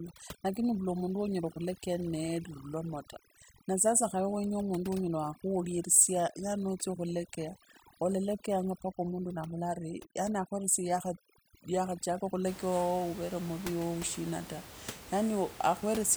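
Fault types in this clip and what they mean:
Overdone noise removal: the denoiser's pushed too hard from the start to 12.47 s, clamping bands that sit near its noise guess, so the room noise, about 17 dB under the speech, drops and breaks up into twinkly specks.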